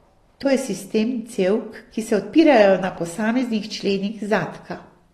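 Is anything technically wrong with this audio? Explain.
Yes. Throughout, the speech sounds dull and fizzy, with nothing above 12.4 kHz. The likely cause is AAC compression quantising the spectrum coarsely enough to suggest about 32 kbps.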